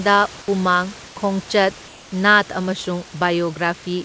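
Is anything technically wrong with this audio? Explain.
Yes. In two short pauses, from 1.08 to 1.16 s and again from 1.88 to 2.12 s, the room background drops out and is replaced by a flat, featureless hiss about 2 to 3 dB quieter, with none of the room's texture. That is comfort noise in place of the background, likely from discontinuous transmission: the sender stopped transmitting during the silence, and the receiver filled the 80 ms and 240 ms gaps with synthetic noise shaped to match the background. The call path itself cuts everything above 8 kHz, consistent with G.722.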